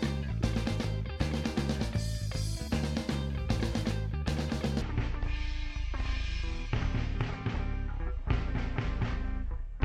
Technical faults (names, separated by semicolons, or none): section at the wrong speed